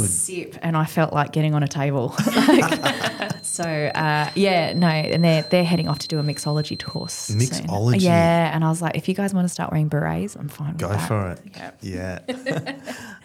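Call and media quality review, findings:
Feedback whistle, 2.65 to 7.57 s. Thin steady tone at 4.1 kHz, about 15 dB under the main sound, slow level swell and fade. Likely cause: speaker-to-mic acoustic loop at the edge of instability, with gain just short of runaway, so a single frequency sustains. Check endpoint echo control and mic gain.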